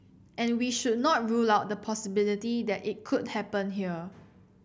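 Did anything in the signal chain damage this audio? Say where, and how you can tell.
No, nothing in the chain audibly damaged this speech recording at any stage.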